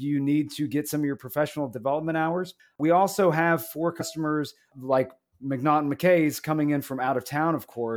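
It's a short speech clip with one glitch: at about 4.00 s some compressed frames are skipped. The audio jumps forward by something like 70 ms, which fits roughly three frames of about 23.2 ms each going missing or being thrown out by the decoder as damaged. At the join, a small bit of the sound is simply gone.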